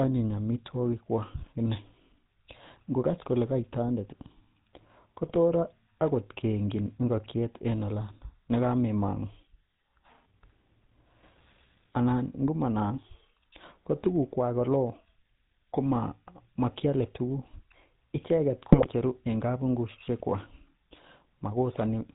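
The whole clip runs through the GSM full-rate codec, probably around 13 kbps, so the speech is gravelly and buzzy with nothing above 4 kHz. GSM bit errors hit at 1.42 to 1.51 s, 5.22 to 5.37 s and 18.72 to 18.87 s: corrupted frame parameters make the speech squawk, pop and gargle briefly.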